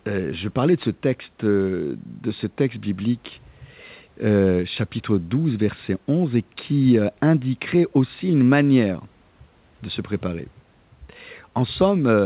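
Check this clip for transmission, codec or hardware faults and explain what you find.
No transmission, codec or hardware faults are present.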